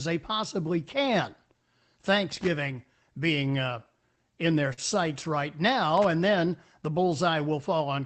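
From 2.31 to 2.48 s there is loose connector crackle: a worn or dirty contact keeps making and breaking, chopping the speech into an irregular burst of scratching. Unlike a dropout, it is not a clean gap. It returns from 5.97 to 6.05 s, just before "and then the."

Between 4.73 and 4.95 s, right after "being uh in their," comes a short stall from a late packet. The jitter buffer ran dry, so the last sound was held for about 41 ms until the packet arrived, and the speech resumed from the same place. Nothing is missing, which sets it apart from packet loss.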